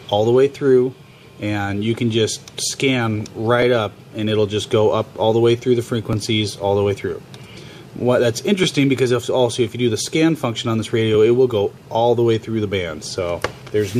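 Overlapping chunks cause brief stutter-clicks at 3.62, 6.13, 8.64 and 11.14 s, evenly spaced about 2.5 s apart. Each join replays roughly 7 ms of audio rather than dropping any, which sets it apart from gap-type dropouts.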